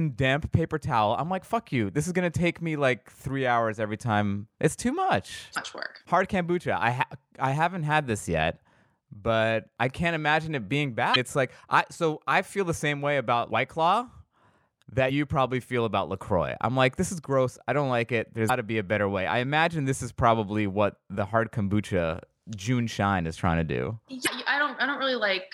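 Five brief glitches turn up at 5.53, 11.12, 15.06, 18.46 and 24.23 s, each about 40 ms long, the first right after "too much". That's damaged data in a compressed stream: the decoder chokes on corrupt frames, loses sync and blips until it finds the next header.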